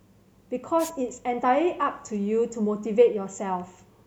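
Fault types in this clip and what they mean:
Wireless microphone noise hit: the analogue FM radio link briefly fades as reflected signals cancel, so receiver hiss swells over the speech from 0.78 to 0.91 s. A spectrogram shows a short broadband noise smear; the waveform shows a fuzzy burst.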